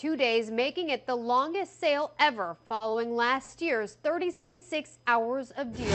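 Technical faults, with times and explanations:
2.67–2.72 s, 2.74–2.82 s and 3.44–3.50 s, short stall from a late packet: the sound hangs for a moment, with a faint buzzy smear, and then carries on from the same point. Each time a packet arrived late and the jitter buffer ran dry, so the receiver stretched the last bit of sound to cover the wait, about 30, 60 and 40 ms. Nothing is skipped. The audio is held, and everything after it is pushed back by the same amount.
4.32–4.63 s, call audio freeze: the sound stops moving and turns into a held, fading buzz for about 290 ms. It never drops to full silence before it resumes exactly where it left off. The likely cause is a burst of delayed packets that emptied the jitter buffer. The receiver kept extending the last sound until data arrived, so a gap was inserted into the audio and nothing was lost. The top end stops near 8 kHz, consistent with an Opus call path at around 64 kbps.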